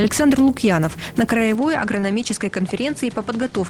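At 1.55 s the sound abruptly turns duller and runs that way to the end, with nothing above 10.5 kHz, a level drop of roughly 5 dB, and a new noise floor appearing around 30 dB down. There's no gap at the change. That pattern is likely an input switched to a poorer device mid-recording.

Then from 1.99 to 2.03 s there's a short concealed packet loss. Roughly 30 ms of audio never arrived, and the receiver patched it by extending the preceding sound before blending back in, so you get a quick smear or wobble right there.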